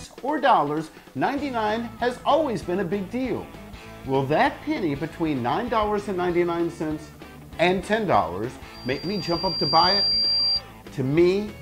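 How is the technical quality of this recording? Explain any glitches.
The recording is marred by one clear glitch, a loudspeaker feedback squeal near the end. From 8.74 to 10.62 s a thin, piercing tone at 4.7 kHz rises out of the sound, swelling over roughly a second until it sits a few decibels above everything else, then stops. It comes from a microphone picking up the loudspeaker it drives: at 4.7 kHz the loop gain passed one, so that frequency kept feeding itself and growing.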